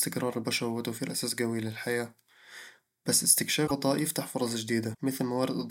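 Speech, with two brief glitches. At 3.66 to 3.71 s the sound jumps ahead and breaks up. At 4.93 s a shorter glitch follows. Both likely come from a broken MP3 bit reservoir, where missing 24 ms frames leave later frames decoding from the wrong data.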